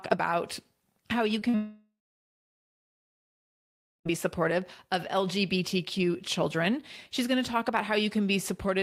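Just after "about how you", two instances of short concealed packet loss occur, at 1.39 to 1.43 s and 1.49 to 1.55 s. Roughly 20 ms and 40 ms of audio failed to arrive, and the receiver bridged each gap by extending the preceding sound, leaving brief smears.

A long network dropout follows from 1.55 to 4.12 s, most likely caused by about 2.5 s of audio failing to arrive. The concealment extends the last sound into a fading buzz or hiss, then about 2.1 s of silence, before audio resumes at "supportive of" with the lost portion gone.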